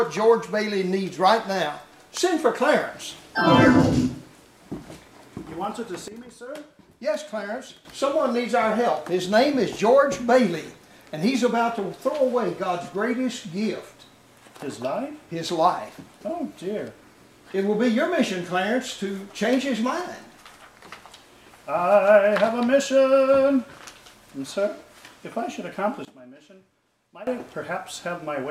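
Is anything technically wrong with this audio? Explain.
Yes. There are two sudden gain jumps. From 6.08 to 7.85 s the level drops by about 12 dB, and from 26.05 to 27.27 s by about 18 dB. Each step is abrupt, and the sound and background noise fall together. A gain setting applied without a ramp is the likely cause.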